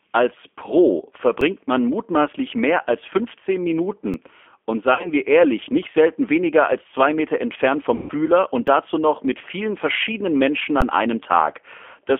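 G.729 codec coding runs through the whole speech clip: at 8 kbit/s, with the line band limited to about 250 Hz to 3.4 kHz, the voice is plainly rough, synthetic and muffled.

An underrun with held sample at 1.41 s lasts 3.5 ms. The output buffer ran dry and the converter froze on its last value, giving a brief flat dropout. Roughly 4 ms of live audio went missing.

Another underrun with held sample at 4.14 s lasts 2.9 ms, which fits a 128-sample buffer. It is the same short stall, with about 3 ms lost.

VoIP packet loss concealed by the speech codec affects 4.94 to 5.10 s. About 70 ms of packets were lost, scattered over 100 ms, with the longest run 50 ms. The decoder stretched its last pitch and filter into a fading sound, and the voice stays weakened afterwards.

More VoIP packet loss concealed by the speech codec runs from 7.95 to 8.13 s. Here 140 ms was lost, so the extrapolated sound decays over a longer stretch before the speech recovers.

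An underrun with held sample at 8.67 s lasts only 1.5 ms. It is a tiny flat hold where a sliver of audio was skipped.

The last underrun with held sample, from 10.81 to 10.82 s, lasts 11.6 ms, which fits a 512-sample buffer. The waveform sits frozen, then resumes about 10 ms further on.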